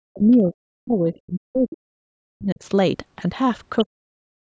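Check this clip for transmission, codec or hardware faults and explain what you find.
Two faults recur in this speech clip, both from the call's echo control. The audio stops at about 8 kHz, which fits a wideband call path and is expected.

Speech suppressed in double talk, from 0.07 to 2.6 s and again from 3.92 to 4.39 s. For roughly two seconds in the first stretch, and a little under half a second in the second, the talker's level sinks, at its deepest by about 40 dB, and parts drop out. The likely cause is the echo canceller mistaking overlapping speech for loudspeaker echo and turning the microphone down.

Other side's voice leaking through, at 1.14 to 1.19 s and 3.78 to 3.85 s. A brief fragment of a second voice appears. The first is faint, about 35 dB under the speech. The second is much clearer, about 15 dB under. The likely cause is loudspeaker sound that the echo canceller failed to remove from the microphone. 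It differs from room reverberation because it is a separate voice, not a decaying tail of the talker's own sound.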